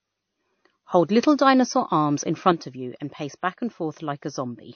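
Transcoding between lossy codecs affects this speech recording throughout. Nothing is present above 6.5 kHz, and two different sets of coding artefacts are layered together, which fits a low-rate MP3 around 32 kbit/s likely re-encoded as WMA near 64 kbit/s, so the second codec spends its bits reproducing the first one's damage. One channel drops out from 2.52 s to the end, where the level abruptly falls by about 6 dB. This is consistent with one stereo side going silent, likely followed by a mono fold-down that halves the shared content and loses anything unique to the missing side.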